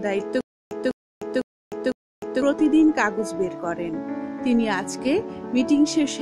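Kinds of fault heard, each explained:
Stutter with silent gaps: from 0.41 to 2.42 s the same fragment of about 200 ms plays four times, each followed by roughly 300 ms of dead digital silence, so the burst returns at a steady beat of about one every 0.5 s. Whatever should have sounded in that stretch never arrives. The likely cause is a stalled player or stream that replayed its last buffered fragment at each retry, then ran dry again.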